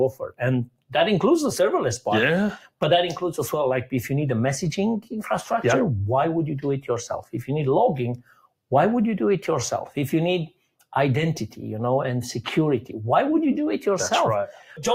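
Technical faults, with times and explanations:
Throughout: noise suppressor applied to music or sounds. A suppressor built for speech stays active, treating steady tones, ambience and reverb as noise and pulling them down. Gain rides up and down by about 5 dB, so sustained parts pump and thin while attacks pass.
0.12–0.41 s, 0.66–0.94 s, 8.17–8.53 s: sound cut by the noise suppressor. In each of these stretches the suppressor mistakes the sound for noise and clamps it, by about 18, 19 and 18 dB at deepest. Held or decaying sound sinks for a fraction of a second or has its decay cut short, while sudden sounds mostly come through.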